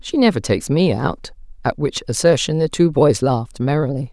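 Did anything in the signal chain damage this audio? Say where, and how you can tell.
No, nothing in the signal chain has damaged this speech recording. There is no audible sign of trouble at any stage between capture and playback.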